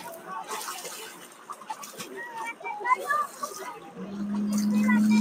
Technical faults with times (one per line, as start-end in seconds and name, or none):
0.00-5.21 noise suppressor applied to music or sounds
1.07-2.06 sound cut by the noise suppressor
3.79-3.98 sound cut by the noise suppressor